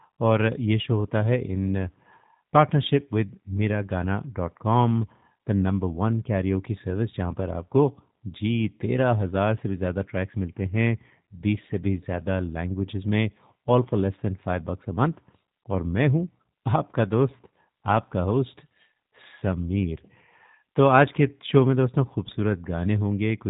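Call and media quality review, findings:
G.729 codec damage across the whole speech clip: nothing above 3.8 kHz, rough, slightly synthetic texture from filter-and-pulse rebuild, which fits an 8 kbit/s G.729A leg.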